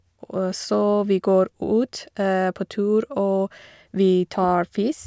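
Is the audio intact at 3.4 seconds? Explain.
Yes, at 3.4 seconds the speech plays through intact with no audible fault.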